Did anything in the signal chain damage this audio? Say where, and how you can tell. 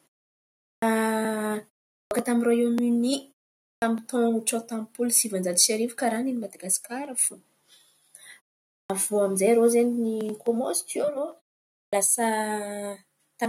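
Yes. A clipped start after a pause at the playback stage: the output device sleeps through each pause and wakes late, swallowing about 60 ms of onset at 0.76, 2.05, 3.76, 8.84 and 11.87 s. Plain muted pauses would silence only the gaps. Here the opening sounds themselves are lost.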